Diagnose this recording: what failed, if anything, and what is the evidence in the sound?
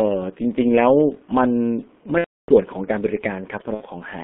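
Codec stage: G.723.1 at 6.3 kbit/s confines speech to 200 Hz–3.4 kHz. Hoarse, smeared consonants throughout point to coarse low-rate modelling, not a simple band-limiting filter.

Network stage: VoIP packet loss concealed by the speech codec at 2.18–2.51 s, about ten 30 ms frames, and at 3.74–3.82 s. Fading extrapolated sound, which mutes from the third lost frame in the longer gap.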